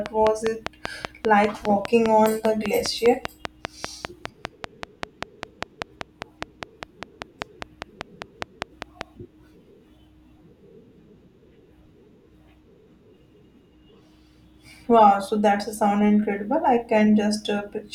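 A speech recording carrying a regular train of clicks from 0.06 to 9.02 s, about five per second, roughly 50 in all, standing well above the signal. The likely cause is interference or a faulty connection or power supply.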